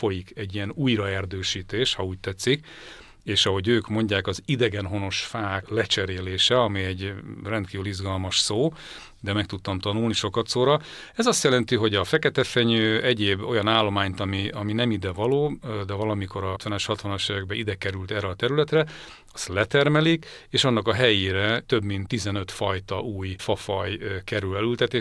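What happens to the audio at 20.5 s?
Nothing goes wrong at 20.5 s; the audio there runs on intact, with no dropout, glitch or distortion to be heard.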